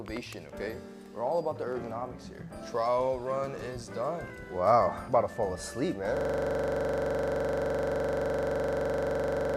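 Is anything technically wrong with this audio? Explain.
Yes. From 6.17 s to the end, the audio falls into a system hang loop. The same 42.67 ms slice repeats about 80 times at a steady 23.4 Hz, which fits a 2048-sample ring buffer that the hardware kept replaying after the system froze. The result is a rapid, rattling flutter rather than a clean tone. Unlike an underrun stutter, the repeats are exactly identical, perfectly regular, and never recover.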